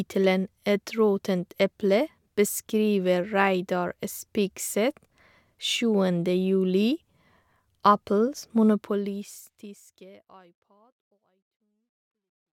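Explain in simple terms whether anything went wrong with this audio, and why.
Nothing went wrong here, and the gentle fade-out of the speech, easing down from around 8 or 9 seconds until it's gone at about 12.6 seconds, is just a smooth fade of the kind an editor puts in, not a problem.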